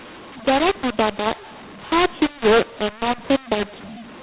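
From start to finish, the speech carries a mu-law and A-law mix-up. Samples stored as mu-law are expanded with the A-law curve, so levels are scrambled: some peaks swell, others shrink, and near-silent samples jump well above zero. Speech sounds harsh and gritty, and pauses hiss instead of going quiet. A waveform shows a jagged, uneven envelope with a raised floor between phrases. A spectrogram shows broadband noise smearing up to the 4 kHz ceiling, a cut-off that fits telephone-rate sampling.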